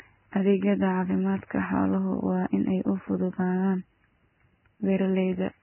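From start to finish, the speech is dull and grainy. Nothing sounds above about 3.1 kHz, so the treble is simply gone. What remains up top hisses and fizzes. Vowels sound rough, and consonant onsets are smeared. The likely cause is heavy Vorbis compression, at a rate that fits roughly 10 kbps. At that rate the codec lowers its cut-off and quantises the upper band so coarsely that fine detail turns into noise.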